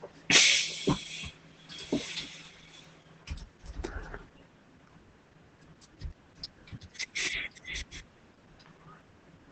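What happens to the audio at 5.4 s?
At 5.4 s the speech sounds muffled, hoarse and slightly robotic, with nothing above about 8 kHz, as it does throughout the clip. This is Opus voice compression: its SILK predictive coder, at a low bitrate that fits around 12 kbps, codes the excitation coarsely and narrows the band.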